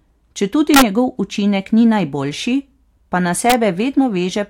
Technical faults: integer overflow

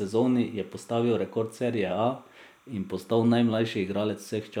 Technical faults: timecode bleed

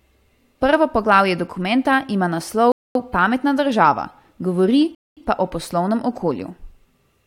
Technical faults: rebuffering stall

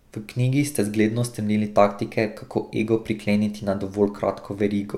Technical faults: none

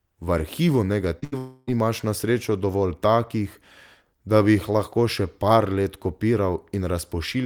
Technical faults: short concealed packet loss; burst of packet loss; long network dropout

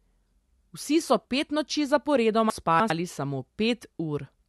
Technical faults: chunks out of order

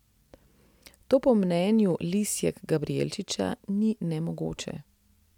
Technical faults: none

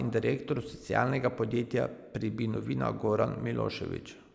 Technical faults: none

